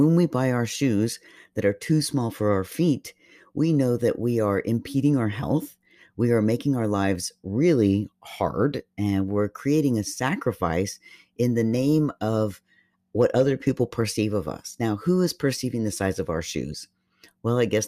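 No technical faults can be heard anywhere in the speech recording, with the signal holding steady at its normal level and bandwidth throughout.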